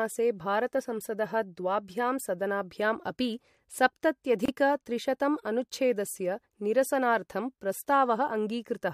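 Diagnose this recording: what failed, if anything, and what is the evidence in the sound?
Codec stage: a gap at a join of encoded pieces. The speech cuts to silence from 4.46 to 4.48 s, lasting 28 ms. Its edges are smeared. Speech then resumes where it stopped. Separately encoded segments were joined untrimmed, keeping encoder start delay and last-frame padding.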